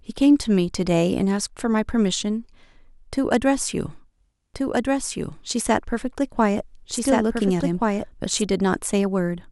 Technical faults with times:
4.54-8.42 doubled audio track

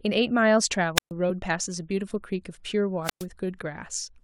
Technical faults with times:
0.95-1.11 wireless microphone squelch dropout
1.27-1.30 damaged data in a compressed stream
3.03-3.26 wireless microphone squelch dropout

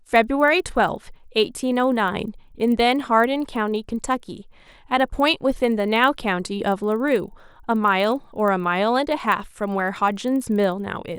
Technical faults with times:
0.00-11.18 resampler restarted on every block

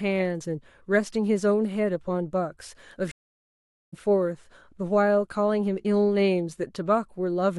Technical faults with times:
3.11-3.94 stream reconnect

